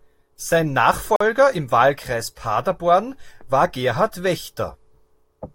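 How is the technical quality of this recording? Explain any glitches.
The speech has one glitch: a Bluetooth stall from 1.16 to 1.21 s. The sound drops to 44 ms of silence, likely because the headphones' buffer ran dry while interfered packets were resent. The waveform shows a flat gap, and the spectrogram shows a blank vertical strip.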